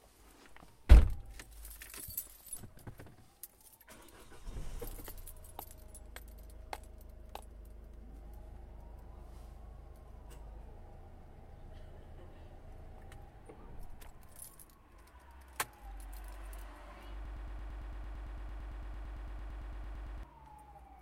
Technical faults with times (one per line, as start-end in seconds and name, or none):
17.25-20.23 broken-record loop